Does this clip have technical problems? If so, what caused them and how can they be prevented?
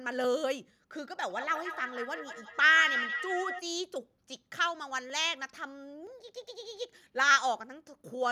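Yes. From 0.24 s to 8.01 s, a short click recurs about every 0.97 s, around ten in all. The steady spacing points to a likely cause: clock drift buffer slips. Two devices run on separate clocks that disagree by a few hundred parts per million. The buffer between them slowly drifts until a small block of samples is dropped or repeated. Each slip breaks the waveform and makes a click. Locking both devices to one clock, or resampling adaptively, prevents this.

From 1.3 s to 3.64 s there is feedback echo between two devices. Each stretch of speech returns roughly a fifth of a second later, thinner and ringing. The loudest repeat is only about 4 dB below the speech. Two devices in the same room are on one call. One plays what the other's microphone sent, and that microphone picks it up again. Each echo canceller removes only its own playback, so the loop continues. Muting one device's speaker or microphone, or keeping only one device in the room, prevents it.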